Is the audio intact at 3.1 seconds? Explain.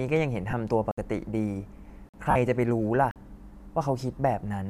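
No. From 3.11 to 3.16 s a 46 ms block of samples, fitting a 2048-sample buffer, was zeroed: a block of digital silence, heard as a short hole.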